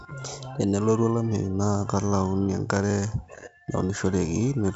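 No technical faults can be heard in this speech clip. It carries the band-limited sound of G.722 wideband telephone coding at 56 kbit/s, with nothing above about 7.7 kHz and only light coding texture.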